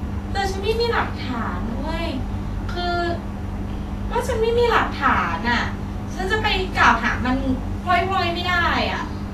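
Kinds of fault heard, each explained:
Vorbis compression: The speech has a plainly audible hissy, grainy treble, with sibilants and consonant attacks smeared and the voice's tone roughened. This is likely a low-bitrate Vorbis encode, consistent with roughly 33 kbps, where fine high-frequency detail was quantised into noise-like residue. A spectrogram shows nothing above 14.2 kHz, a flat shelf edge, and speckled, blotchy texture replacing clean harmonic lines in the upper bands, while waveform transients look softened.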